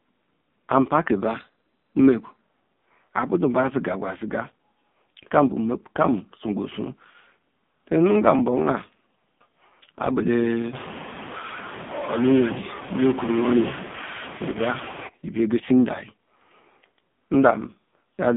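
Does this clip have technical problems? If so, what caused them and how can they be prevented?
Yes, there are three problems.

AMR narrowband mobile codec: The whole clip is band-limited to roughly 150 Hz to 3.6 kHz, with nothing above 4 kHz. The speech has a buzzy, synthetic quality. That heavy damage comes from a vocal-tract model driven by very few pulses per subframe, and it points to one of the lowest AMR-NB modes, around 5.9 kbps. Prevent it by carrying the call over a wideband codec such as AMR-WB or EVS, or at a higher AMR mode.

Drift correction step: From 1.26 to 2.41 s, speed and pitch rise together by 5.2%, about 88 cents or nearly a semitone. Both move at once, which means the playback rate changed in one step rather than the audio being pitch-shifted. The likely cause is clock-matching software refilling or draining its buffer by jumping the resampling ratio. Prevent it by having the software correct drift in small, gradual rate adjustments.

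Lost AMR speech frames: Between 14.52 and 14.57 s there is a brief dip or warble, and the sound comes back rough for a moment. This is the decoder's concealment at work. It reused the last good pitch and vocal-tract settings at lower gain to fill a gap that fits a single lost 20 ms frame, probably discarded after failing its checksum. Prevent it by improving radio conditions or using stronger channel coding and redundancy on the link.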